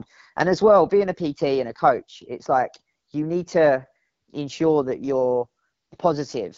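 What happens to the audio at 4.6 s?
At 4.6 s the speech carries the AMR wideband (HD Voice) codec damage that runs through the whole clip. The codec rebuilds the voice from a pulse-driven model of the vocal tract up to 6.4 kHz. Above that, to 7 kHz, it adds shaped noise. Here the coding is plainly audible. The voice sounds rough and raspy. That points to one of the lowest rates, around 8.85 kbit/s.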